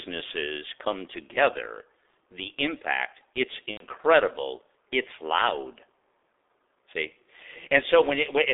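Throughout the clip, the speech has been squeezed through the G.723.1 codec at a very low rate, consistent with about 6.3 kbit/s. The line passes only roughly 300 Hz to 3.6 kHz, and the codec rebuilds the voice from a coarse model refreshed only every 30 ms. Nothing above 3.6 kHz survives, and the heavy coding leaves the speech muffled and hoarse, with consonants smeared rather than crisp.

From 3.71 to 3.85 s, the clip has VoIP packet loss concealed by the speech codec. About 90 ms of audio went missing, which fits three consecutive 30 ms frames. The decoder filled the gap by continuing its last pitch and filter with falling gain, so the sound there stretches into a fading buzz or coloured noise, and the third lost frame is muted. The voice stays weak or distorted for a moment after the stream returns, until the codec's model catches up.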